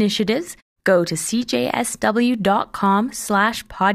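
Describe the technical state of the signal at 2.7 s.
At 2.7 s the speech signal is intact, with no fault present.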